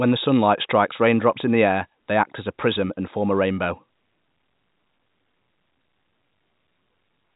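Speech, with no technical fault to report. It has passed through G.711 telephone coding, so nothing above about 3.8 kHz comes through, and any codec damage is faint at most.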